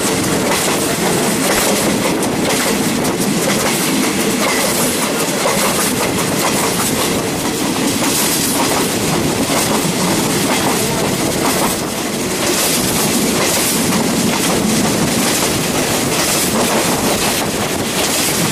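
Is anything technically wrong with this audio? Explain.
Yes. DAB burbling occurs from 1.52 to 1.64 s. Weak reception let a small fraction of a percent of bit errors slip past error correction into the MP2 data, which fits about six damaged frames. Corrupted samples in single sub-bands produce a short burst of noise blips.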